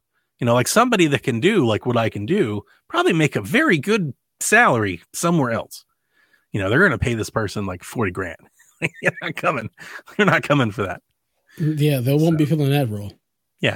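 No technical faults can be heard anywhere in the speech recording.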